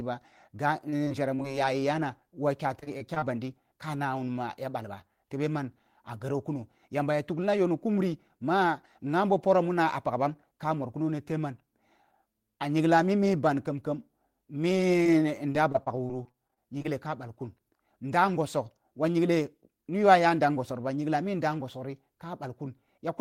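Repeated packet loss (robotic sound) occurs at 0.73–1.55 s, 2.80–3.24 s and 15.03–16.86 s. The speech keeps dropping out in gaps of up to 22 ms, each bridged by extending the preceding sound, so these stretches turn choppy.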